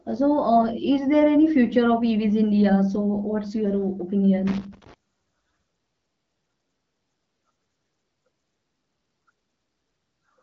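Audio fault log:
4.47–4.94 s, loose connector crackle: for about half a second the speech breaks into an irregular, scratchy burst as a worn or dirty contact rapidly makes and breaks, chopping the signal and adding pops from any DC on the line. Unlike a regular digital click train or codec dropout, the spacing of the crackles is uneven and mechanical. The burst rides on top of speech that stops near 7 kHz, consistent with an AMR wideband (HD Voice) path.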